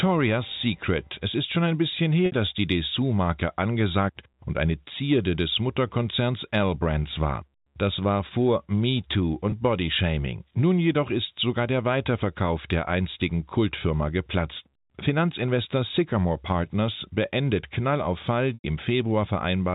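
Packets drop out of the G.711 telephone stream three times, and the receiver bridges each gap by repeating the last pitch period (packet loss with pitch repetition). At 2.26 s, 60 ms after "ist schon ein bisschen" holds buzzily before "dass die". At 9.5 s, 20 ms briefly sustains. At 18.54 s, 100 ms fades toward silence, then cross-fades back.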